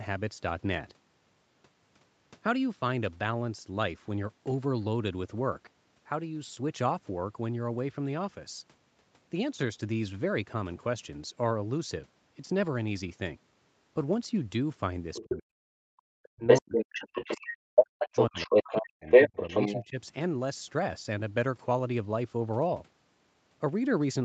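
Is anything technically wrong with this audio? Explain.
Yes. Between 15 and 20 seconds, the other side's voice leaks through at 15.14–15.36, 16.47–17.51, 17.75–18.87 and 19.07–19.78 s. It sits from a little below to well above the talker's level, likely from incomplete echo cancellation of loudspeaker playback. It is an audible second voice, not reverb.

Speech is also suppressed in double talk at 15.2–17.45, 17.82–19.09, 19.27–19.38 and 19.79–19.98 s. The talker drops very deeply, and less in the final event, likely because the canceller ducked both voices while the far side spoke. These are dips during overlap, not dropouts.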